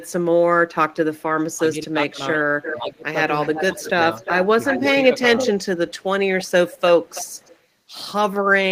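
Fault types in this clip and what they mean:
Echo leak: A delayed copy of the sound trails the main signal, most likely because the far end's echo canceller isn't catching everything its mic hears from its speaker. It turns up at 0.0 to 0.12 s, 2.36 to 2.78 s, 3.41 to 6.05 s and 6.41 to 7.59 s, lagging by 329 to 393 ms. The first bit is very quiet, about 30 dB down, but the middle two sit only about 10 dB below.
Speech suppressed in double talk: The speech dips in level in short bursts while both sides talk at once, likely the canceller's suppressor clamping down because it can't tell local talk from the returning echo. You'll hear it at 1.56 to 2.2 s, 2.77 to 3.15 s, 3.53 to 3.9 s and 4.78 to 5.38 s. The worst drop is around 25 dB in the second one, roughly 15 dB in the first and third, and only a slight dip in the last.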